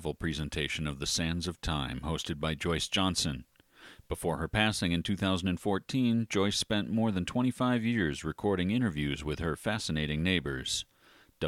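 Nothing in this speech recording stands out as a technical fault, so there's nothing to walk through here.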